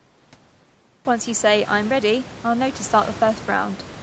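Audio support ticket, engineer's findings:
No fault found in the speech audio for this ticket; room noise rises about a second in but stays well below the speech, and the call path's bandwidth ends at 8 kHz as expected.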